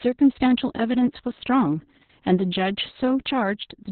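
From start to finish this speech carries heavy Opus voice compression: nothing survives above about 4.3 kHz, so it's narrowband and muffled, with a hoarse, slightly robotic edge from coarse SILK excitation coding, which fits a very low rate around 6 kbps with long 60 ms frames.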